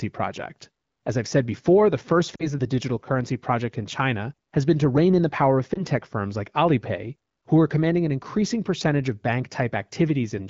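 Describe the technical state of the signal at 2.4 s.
At 2.4 s the signal shows lost AMR speech frames, between 2.35 and 2.48 s. About 40 ms of coded speech is missing, which fits two consecutive 20 ms frames failing their checksum after radio errors. The AMR-WB decoder conceals the gap by repeating the last good pitch and vocal tract parameters at falling gain. The sound dips quickly toward silence, reaching near silence within the two frames, then recovers weak or rough for a moment before returning to normal level.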